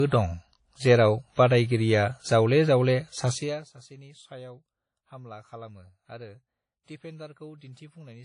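Speech, with a dull, smeared top end and two layers of swirly, watery artefacts throughout, and nothing above about 10.1 kHz. This is likely transcoding between lossy codecs, which fits a low-rate WMA encode re-encoded as AAC-LC at a higher bitrate.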